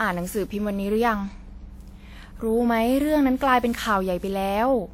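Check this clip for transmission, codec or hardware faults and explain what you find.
Two faults, both running through the whole clip.

Mains hum: there's a steady 60 Hz tone with a few low harmonics, sitting only around 25 dB below the speech. A ground loop or nearby transformer is bleeding the power line into the signal, so you hear a constant low drone under everything.

Generation loss: the speech sounds swirly, smeared and hollow, and consonant attacks are blurred. That's more damage than a single lossy pass would cause. It's likely the result of roughly ten rounds of decoding and re-encoding with a WMA-style codec. The sound fits around 96 kbit/s, though there is content up to 20 kHz. Each pass quantises again on a shifted frame grid, so the noise and spectral holes keep piling up.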